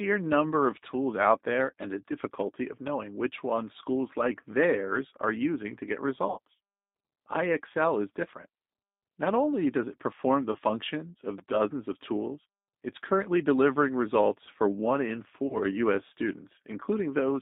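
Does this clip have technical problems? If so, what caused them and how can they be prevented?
Yes. The whole speech clip goes through the G.729 codec at 8 kbit/s. Only about 200 Hz to 3.7 kHz survives. The voice is rebuilt from a filter, a pitch predictor and a few pulses, so it sounds plainly rough and synthetic. To prevent it, use a wideband codec such as Opus.

VoIP packet loss concealed by the speech codec occurs three times. The first is at 6.30 to 6.38 s, after "are using to get". The second is at 10.52 to 10.59 s, after "does it perform the". The third is at 15.47 to 15.58 s. The decoder stretches its last sound into a fading buzz, and the voice stays weak briefly afterwards. The first gap is about 60 ms and fits two lost packets. The others are about 30 ms each. To prevent it, improve the network path and add a jitter buffer or forward error correction.

A repeated buffer stutters at 11.38 s, just before "dozens of tools it's". 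A 5.8 ms piece plays four times with hard joins. This fits a 256-sample buffer. It sounds like a brief buzz. To prevent it, use a larger buffer or give the audio thread higher priority.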